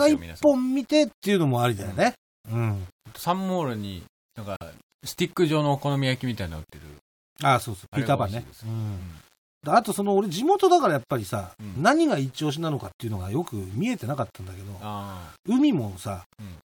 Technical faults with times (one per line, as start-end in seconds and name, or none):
0.00-16.70 low bit depth without dither
4.56-4.62 corrupt frame muted